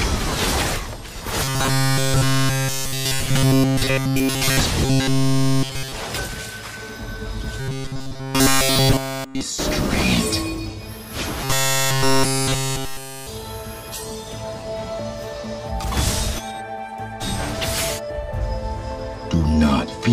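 Robotic sound from repeated short buffers shows up at 1.44–4.60, 4.85–5.94, 7.60–9.41 and 11.44–13.27 s. The audio collapses into a rigid metallic buzz at 134 Hz, with essentially all of it repeated. That most likely comes from a roughly 7.5 ms buffer being looped while fresh audio was starved.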